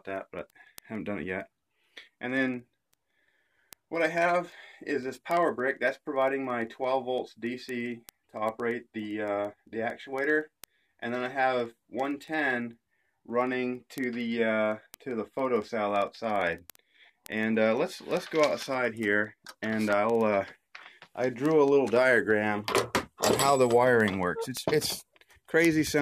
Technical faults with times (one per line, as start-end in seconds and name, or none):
0.10-25.99 word clock ticks